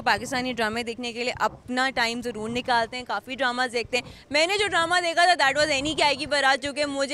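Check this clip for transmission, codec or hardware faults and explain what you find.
Nothing in the transmission, codec or hardware chain shows up as a fault anywhere in the recording.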